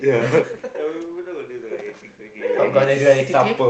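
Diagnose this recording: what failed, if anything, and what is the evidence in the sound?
Nothing in the chain has failed: the background room noise belongs to the recording itself, the level changes around half a second and again near 2.5 s come from the talker moving relative to the microphone, and the top end stopping at about 8 kHz, along with a coding texture, is what a call path through the Opus codec at a modest bitrate near 24 kbps normally leaves.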